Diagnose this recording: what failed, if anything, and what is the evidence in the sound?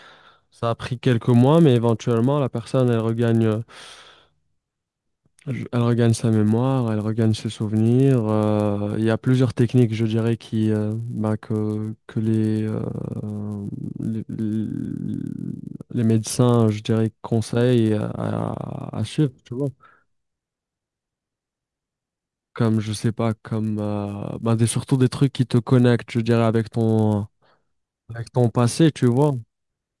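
A steady 100 Hz buzz rides on the speech across the whole clip and drops away in the pauses, so it exists only where there is signal. That pattern points to the sample-rate conversion stage, a resampler restarted on every block. Each 10 ms block was converted in isolation, likely in a halving such as 48 to 24 kHz, so the filter lacked its true neighbouring samples at every block edge. The resulting error repeats 100 times a second.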